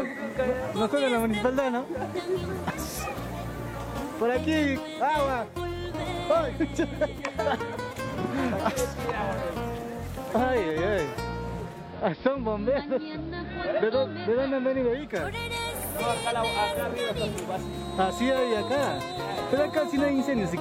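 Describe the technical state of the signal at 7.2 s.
At 7.2 s the signal is intact, with no dropout, click, distortion or other fault audible at that point.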